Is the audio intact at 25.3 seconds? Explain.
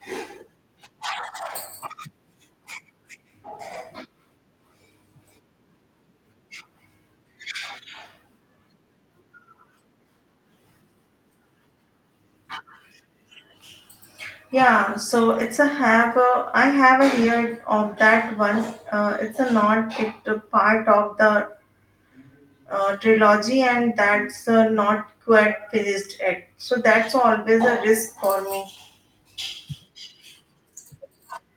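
Yes, the speech at 25.3 s is intact, with no dropout, click, distortion or other fault at that moment.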